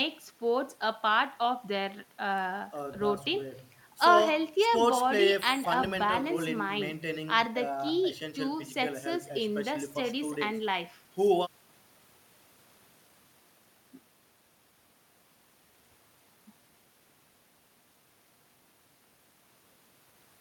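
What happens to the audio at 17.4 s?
Nothing goes wrong at 17.4 s; the speech plays through that moment intact, with no dropout, click or distortion.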